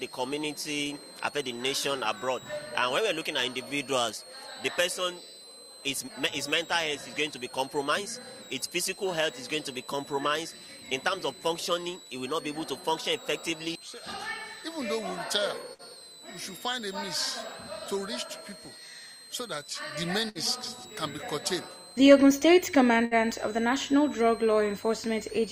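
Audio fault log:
throughout: switching supply whistle. A high whistle centred near 4 kHz sits about 20 dB below the programme. Its pitch wanders between roughly 3.7 kHz and 4.4 kHz instead of holding steady. A switching power supply running in an audible burst mode, or beating against a second supply, would produce this: the switching frequency shifts as the load changes, and so does the whistle.
0.16 s to 25.51 s: clock slip clicks. Faint, evenly spaced ticks repeat about every 0.07 s, around 14 per second. They are clearest on loud, high or sustained material and vanish in silence. The likely cause is two devices running on unsynchronised clocks that differ by roughly 300 ppm. Each time the drift adds up to a whole sample, a sample is dropped or repeated, which fits single-sample slips at this steady rate.
15.73 s, 20.29 s, 23.05 s: burst of packet loss. At each point the sound freezes into a held, decaying buzz or fading hiss lasting 53 ms, 63 ms and 60 ms, then picks up further along with about 60 ms of material gone each time. 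A run of lost or late packets left the receiver with nothing to play, so it extended the last sound and attenuated it until real audio arrived again.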